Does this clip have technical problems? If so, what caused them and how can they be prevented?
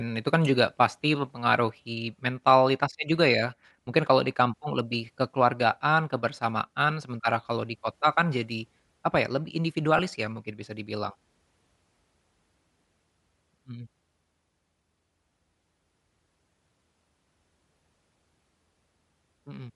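Yes. Throughout the speech there's a breathy, grainy edge where the upper spectrum gets thinned out and filled with noise, which is likely Bluetooth LC3 compression, and the damage fits roughly 48 kbps with 10 ms frames. Pushing the link to a higher LC3 bitrate would prevent it.

There are also two lost LE Audio frames, each about 10 ms. One is at 3.86 s, right after "mempengaruhi mentalitasnya juga ya". The other is at 9.98 s, between "jadi apa ya lebih" and "ya mungkin bisa dibilang". At each gap the decoder repeats the last spectrum with scrambled signs, leaving a brief noisy smear. Keeping the devices close with less radio interference would prevent these.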